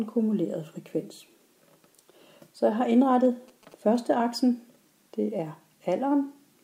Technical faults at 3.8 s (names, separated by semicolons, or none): GSM signalling bursts